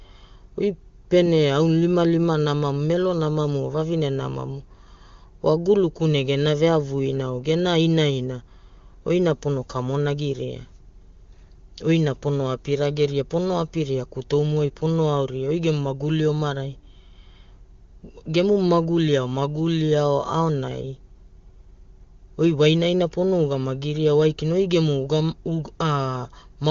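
Speech carried over AMR-WB, with no faults heard.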